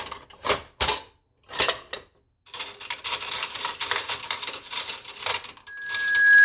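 At 5.67 s loudspeaker feedback squeal starts. A microphone re-captures its own loudspeaker, and a 1.7 kHz tone swells over roughly 0.7 s to about 15 dB above the sound, lasting to the end at 6.44 s.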